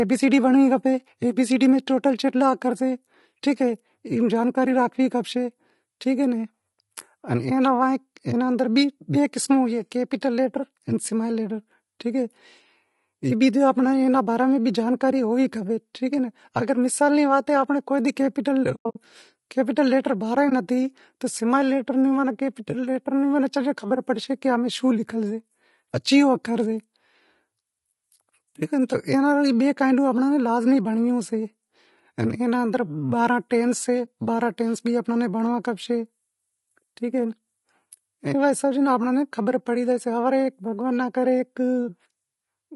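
From the start, the speech sounds rough and grainy. Noise fills the gaps between harmonics, and the top band sounds thin and synthetic. This is plainly audible low-delay AAC compression. The likely cause is AAC-ELD at a bitrate around 32 kbps.

From 18.75 to 18.97 s, the sound drops out in several soft-edged holes. This is AAC frame loss with muting. Lost frames were decoded as silence, and the overlapping windows fade each gap out and back in. About 160 ms vanish over 200 ms, with the longest hole around a tenth of a second. Shorter single dips of about 20 ms follow at 20.49 to 20.52 s and at 34.05 s.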